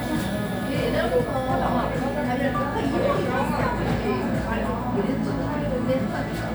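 No technical faults are audible.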